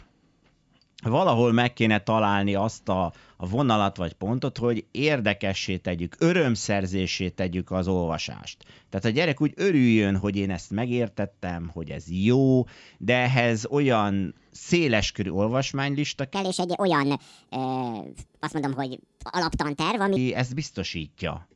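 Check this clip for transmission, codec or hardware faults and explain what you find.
One fault is present: a wrong sample rate. It runs from 16.35 s to 20.16 s, starting right after "olyan széleskörű olvasmánylista". The speech plays back 1.5 times too fast and rises about 7 semitones, so it sounds high and hurried. Samples are being played at a higher rate than they were recorded at, with no conversion. Speed and pitch shift together by that ratio, which fits 16 kHz audio played at 24 kHz.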